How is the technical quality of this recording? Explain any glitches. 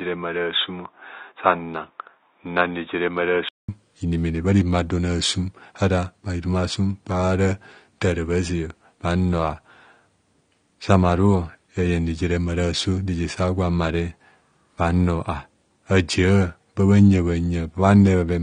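Technical quality is limited: the speech is band-limited and audibly codec-damaged throughout, with a poorer input device at the start.

From 0.0 to 3.69 s, the input was likely switched to a poorer device: nothing above 3.8 kHz, a few dB quieter, then a 0.2 s silence before fuller sound returns.

Throughout, AAC compression, likely low-bitrate AAC-LC around 32 kbps, removes everything above 9.7 kHz and leaves plainly audible smearing and fizzy, warbling sibilants.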